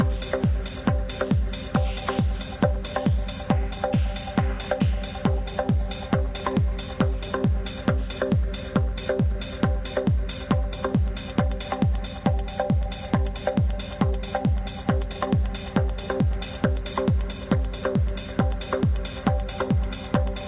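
Nothing is technically wrong with this audio, which carries the narrow band of a G.711 A-law call path with nothing above 4 kHz.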